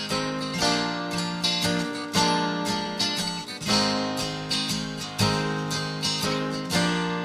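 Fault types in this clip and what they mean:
No technical faults can be heard anywhere in the audio: the level stays steady, with no interruptions, distortion or added noise.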